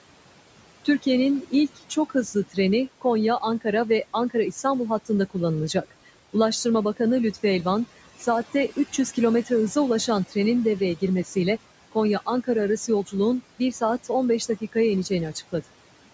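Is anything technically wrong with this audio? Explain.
Yes, there are three problems, and they overlap across the whole clip.

Noise suppressor artifacts run from start to finish. The suppressor lowers the room noise by about 18 dB wherever it judges a frequency band to be steady background, deciding frame by frame. Because it works band by band, the noise floor drops in the gaps and comes back up under the speech. The room noise itself sits about 17 dB below the speech, and the call path's band limit at 8 kHz can be heard as a lack of top end.

Clock slip clicks are present from 0.11 s to 16.10 s, roughly every 0.05 s, so about twenty per second. That steady rate points to a clock mismatch of around 500 ppm between two devices. The likely cause is that one side drops or repeats a single sample each time the drift adds up to a whole sample. At this density the individual ticks merge into a soft, regular rattle that rides on the louder and more sustained parts of the speech and disappears in the pauses.

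Speech cut by the noise suppressor occurs in three stretches. The first runs from 0.85 s to 7.44 s, with the deepest drop about 17 dB and under a second affected in total. The second runs from 8.2 s to 11.36 s, with the deepest drop about 15 dB. The third runs from 11.92 s to 15.54 s, with the deepest drop about 16 dB. The second and third stretches each have roughly 0.4 s affected. In these spans the suppressor mistook quiet speech energy for noise, so soft consonants and word endings are pulled down with the background and sound swallowed or faint.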